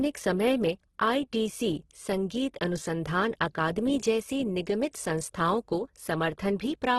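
Heavy low-bitrate coding, most likely Opus compression in its CELT music mode, runs through the whole speech clip, and the damage fits a rate of around 12 kbps. With too few bits, the encoder fills bands by folding lower content upward or with noise rather than leaving gaps, so the speech sounds rough, grainy and hissy instead of swirly. The band is held to super-wideband, with nothing above about 12.1 kHz.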